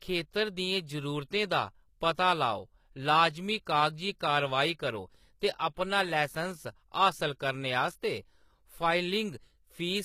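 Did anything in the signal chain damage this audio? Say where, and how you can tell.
Yes. Throughout the speech the top end sounds bright yet artificial: sibilants come out gritty and plainly metallic, with a lisping edge, and nothing is present above about 14.9 kHz. This points to the codec stage, likely HE-AAC compression at a low rate, plausibly around 20 kbps. Only the lower spectrum is coded properly; the treble is synthesised by copying lower bands upward under a coarse envelope, so its harmonics don't line up with the real ones.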